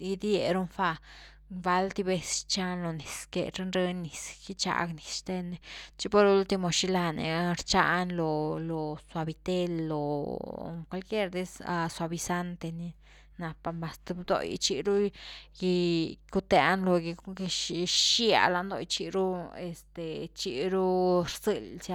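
A steady mains hum runs under the speech from start to finish. It sits at 50 Hz, a low, constant drone with some low harmonics above it. The power line is leaking into the signal, through a ground loop or a nearby transformer. The hum stays about 30 dB below the speech.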